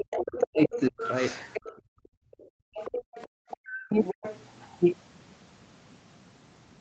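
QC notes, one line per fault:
0.0–1.02 s, 1.92–2.0 s and 3.88–4.25 s: speech suppressed in double talk. The talker's level drops sharply, by roughly 40 dB at its deepest. Parts of the speech thin out or vanish in pieces. About a second is affected in the first span, about 70 ms in the second, and about 200 ms in the third. The likely cause is an echo canceller that cannot tell the near talker from loudspeaker echo, so it ducks both.
0.11–1.78 s, 2.39–3.57 s and 4.04–4.78 s: other side's voice leaking through. A second, fainter voice sits under the talker. It is roughly 10 dB below the speech in the first span and roughly 15 dB below in the later two. This is likely far-end audio from a loudspeaker that the echo canceller failed to fully remove from the microphone signal.
2.28–3.6 s: background gated by the echo canceller. The room tone drops away while the far-end audio plays, by about 40 dB at its deepest. 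In total, roughly 0.7 s of the background goes missing before it comes back. The canceller is clamping the microphone hard while the loudspeaker is active, then releasing it. The result is a hole in the ambience. Above all of this, the audio has no content past about 8 kHz, which fits a wideband Opus call stream.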